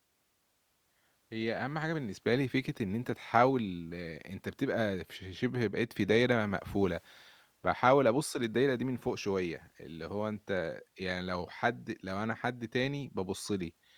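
No technical faults can be heard anywhere in the speech. At no point does the audio falter, break or change character.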